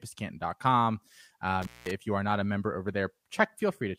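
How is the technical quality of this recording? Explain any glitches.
The speech has one glitch, an intermittent contact from 1.62 to 1.91 s, just before "you are not a". A loose plug or cable connection briefly lost contact, so the signal path was physically broken for about 190 ms within that span. The speech drops out abruptly, with crackle where the contact scrapes open and again as it reseats, and a faint hiss remains in the gap until the sound returns.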